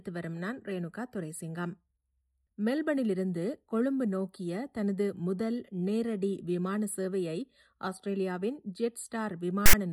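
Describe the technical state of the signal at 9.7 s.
At 9.66 to 9.73 s there's a brief case of file tags played as audio: text metadata decoded as samples gives a hard-edged, lopsided, loud rasp.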